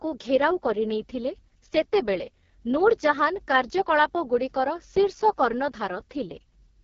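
From start to finish the speech carries AMR wideband (HD Voice) codec damage, and it is heavy. Voiced sound turns rough and raspy, which fits the lowest AMR-WB rate, around 6.6 kbit/s, where the pulse-driven vocal tract model has too few bits. On a spectrogram, harmonics look smeared and grainy up to 6.4 kHz, with a noise-filled band above and nothing at all beyond 7.4 kHz.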